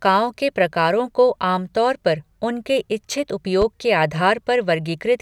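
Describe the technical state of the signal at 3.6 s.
A single loud pop sits on the speech from 3.62 to 3.64 s, just after "तौर पर उनके इच्छित". It is one sharp click, lasting about 26 ms. It peaks a few decibels above the speech. The speech carries on beneath it without a break. A brief voltage pulse was added to the signal. Its likely source is a plug, switch, static discharge or driver glitch. The circuits after it shaped the pulse into the thump heard here.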